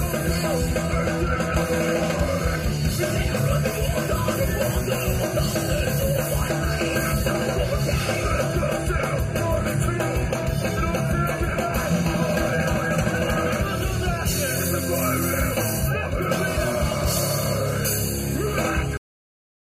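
At 18.97 s the audio hits a cut-off end: the sound stops mid-event and drops straight to digital silence, which holds for the final 0.69 s. The last buffers were never written or played, so the signal is severed rather than finished. What separates this from a dropout is that nothing resumes afterwards. Unlike a deliberate fade-out, there is no gradual decline in level and no decay or room tail.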